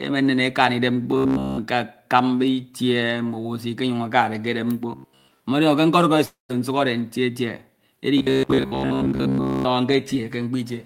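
Speech with two kinds of fault. Robotic sound from repeated short buffers appears at 1.11 to 1.61 s, 4.92 to 5.40 s and 8.18 to 9.65 s. It is a rigid, metallic buzz fixed near 66.7 Hz that still roughly follows the speech. The likely cause is audio arriving too seldom, so the last 15 ms is replayed while most of the real audio is skipped. A long network dropout at 6.25 to 6.51 s differs because the speech stops moving forward rather than buzzing along with it. About 240 ms is lost, a fading fill covers 235 ms with 140 ms of silence, and speech resumes with the gap, likely from audio that never arrived.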